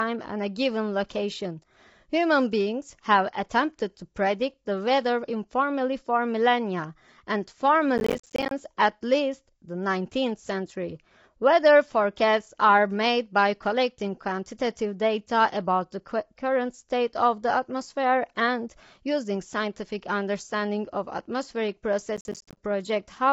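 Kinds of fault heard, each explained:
Low-delay AAC compression: the speech sounds rough and grainy throughout, with noise filling the spaces between harmonics and nothing above 7.7 kHz. That points to a low bitrate near 24 kbps and likely AAC-ELD, whose short frames resolve pitch harmonics poorly.
Processor overload crackle: audio buffers of around 10 ms were not finished in time, and each miss left a hard-edged silent gap. Runs of these gaps tear through the speech as gritty crackle from 7.98 to 8.51 s and from 22.17 to 22.57 s.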